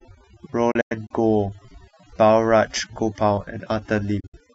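Speech processed with overdone noise removal throughout: the noise reducer is set so aggressively that individual frequency bands near its noise estimate are pulled down or gated out, taking quiet parts of the voice with them. The result is a lowered background flecked with twinkling artefacts. There are two digital broadcast dropouts, where the receiver mutes with a fast fade of about 8 ms until valid frames resume. From 0.71 to 1.11 s, about 160 ms of audio is missing in several short holes, the longest 96 ms, which fits roughly five lost frames. From 4.20 to 4.34 s, about 96 ms is missing, the longest gap 64 ms, consistent with around three lost frames.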